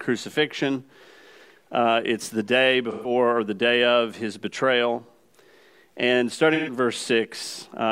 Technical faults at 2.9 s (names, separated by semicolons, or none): AAC frame loss with concealment